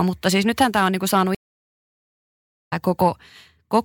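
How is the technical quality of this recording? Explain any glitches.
The recording has one glitch, a stream reconnect in the speech.

At 1.35 s the audio cuts out and stays silent for about 1.34 s, resuming at 2.73 s. The connection dropped, the player waited, reconnected, and started a fresh decoder partway through the stream. Playback picks up roughly one and a half seconds further on than where it broke off, so that stretch of speech is missing rather than delayed. The restart comes in with a short fade-in from the new decoder's first frame.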